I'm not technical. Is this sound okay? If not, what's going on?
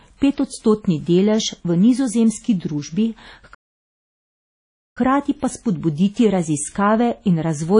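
No. Throughout the speech there is a watery, ringing quality, with a hiss that swells and fades along with the talking. This is most likely WMA compression: the file was squeezed hard to make it small, so fine detail was thrown away and replaced with a smeared, washy approximation of the original sound.

At 3.54 seconds the audio suddenly cuts out and stays silent until 4.98 seconds, a gap of about 1.4 seconds, before carrying on. That interruption is a playback stall. The likely cause is that the player ran short of data, or was held up doing something else, so it had nothing to send out and simply went quiet until it caught up again.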